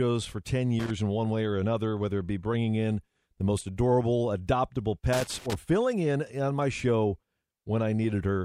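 Loose connector crackle hits at 0.80–0.90 s, just before "in one way or", and at 5.13–5.55 s, between "the most adorable adoptable" and "filling in on my". A poor contact is making and breaking rapidly and chopping the signal. It sounds like irregular scratchy crackle. On a waveform it appears as jagged gaps and spikes, and on a spectrogram as broadband vertical streaks.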